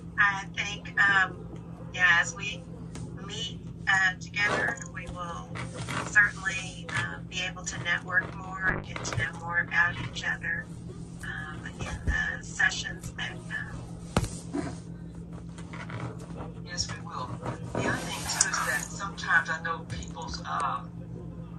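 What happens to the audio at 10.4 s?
At 10.4 s the audio sits inside a call bitrate drop that runs from 8.71 to 14.49 s. The connection's bandwidth estimate fell, so the encoder was forced to spend far fewer bits, and the coarseness points to roughly 11 kbps, down from something near 96 kbps. It codes more crudely and narrows its bandwidth from 20 kHz to 12 kHz, so the sound turns muffled and watery. On a spectrogram, content above 12 kHz vanishes in a flat ceiling, and the remaining detail looks smeared; the waveform envelope barely changes.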